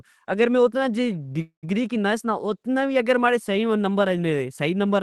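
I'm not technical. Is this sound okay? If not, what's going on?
No. At 1.41 to 1.65 s there is a call audio freeze: the sound stalls into a fading buzz or hiss, then about 0.11 s of silence. It likely happened because call data arrived late and the receiver ran out of audio to play. It then resumes where it stopped, so nothing is lost, but everything afterwards plays about 0.21 s late.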